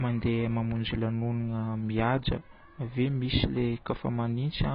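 Speech carrying AAC compression artefacts throughout, likely from a very low AAC-LC bitrate around 16 kbps: nothing above 5 kHz, plus warbly, smeared sibilants that a plain low-pass filter wouldn't cause.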